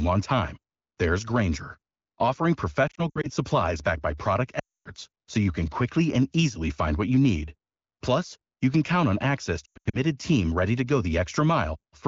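Speech over an AMR wideband (HD Voice) link, where light coding leaves it clear, is broken three times by lost AMR speech frames. The decoder fills each gap by repeating the last good sound with falling gain. From 2.87 to 3.30 s, before "supplies backed by product", short losses warble the sound. From 4.60 to 4.88 s, before "so you can quickly", it drops to near silence. From 9.65 to 9.97 s, before "team ready to go", it drops out.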